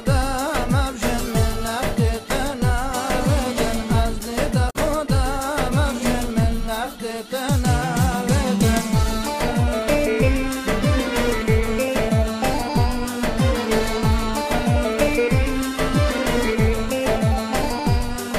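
At about 4.66 s there's a short burst of damaged data in a compressed stream, lasting roughly 0.09 s to 4.76 s. Some bytes came through wrong, so the decoder misread those frames and lost sync while hunting for the next header, which gives you a quick glitch.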